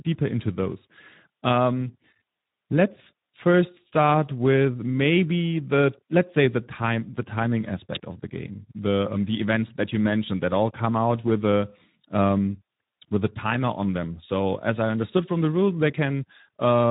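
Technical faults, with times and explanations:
Throughout, Speex codec: the speech has a plainly audible grainy, hoarse coding texture, consistent with roughly 11 kbps, as this CELP coder has few bits to model the excitation. Nothing is present above 3.8 kHz, giving a narrowband, telephone-like dullness.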